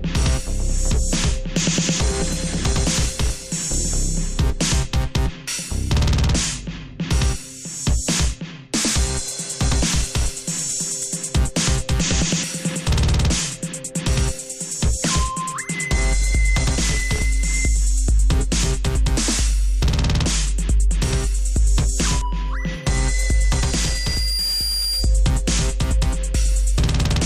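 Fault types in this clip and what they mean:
Loudspeaker feedback squeal: a microphone-loudspeaker loop self-amplifies at 4.8 kHz, swelling within a second to roughly signal level; the spectrogram shows one bright horizontal line.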